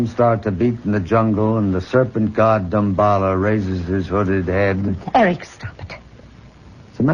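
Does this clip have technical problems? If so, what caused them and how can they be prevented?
No, there are no technical problems to point to in this clip. Nothing goes wrong at any point, so there is nothing to trace back to a cause or to prevent.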